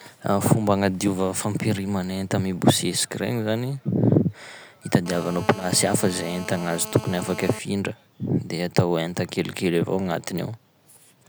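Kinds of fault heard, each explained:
GSM phone buzz: a 2G phone close by is on a call, and the audio circuitry rectifies its radio bursts, so from about 5.06 to 7.59 s there's a steady, raspy buzz at roughly 217 Hz with lots of harmonics, sitting about 14 dB under the speech.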